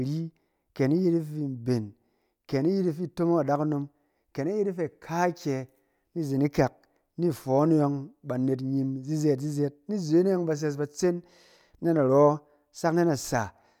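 Nothing stood out on listening to this speech recording.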